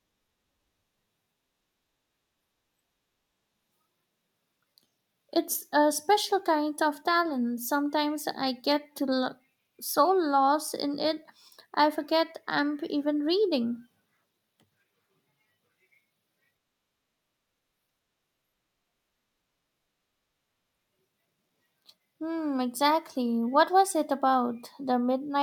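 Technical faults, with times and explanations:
No technical faults are present in this clip.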